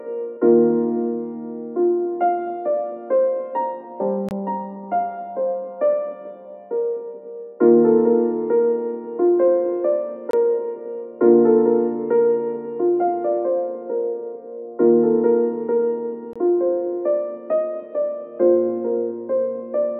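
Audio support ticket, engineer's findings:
Gap between chunks: silent holes, about 23 ms each, at 4.29–4.31 s, 10.31–10.33 s, 16.33–16.36 s. The gaps repeat every 6.0 s, pointing to chunked transport or playback. Nothing missing, but silence is inserted at each chunk join.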